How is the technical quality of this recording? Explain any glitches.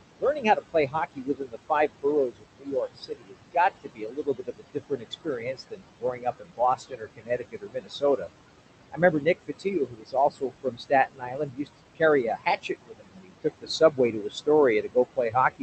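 The recording is degraded by an aggressive noise suppressor throughout, and it also eats into the speech in four stretches.

Noise suppressor artifacts run the whole clip. The suppressor pulls the noise down by about 20 dB, so the background pumps between phrases.

Speech cut by the noise suppressor appears from 0.19 to 8.29 s, 8.92 to 12.02 s, 12.37 to 14.48 s, and 14.82 s to the end. In these spans the suppressor mistakes quiet speech for noise. It drops those parts by about 20 to 22 dB, leaving soft consonants and word endings swallowed. The first span is the worst, with roughly 4 seconds affected, against about 1.5 and 1 second in the next two.

Underneath, room noise sits about 11 dB below the speech, and the call codec tops out near 8 kHz, which fits a 32 kbps Opus link.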